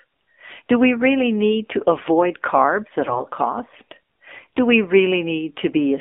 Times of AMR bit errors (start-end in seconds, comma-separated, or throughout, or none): 3.04-3.25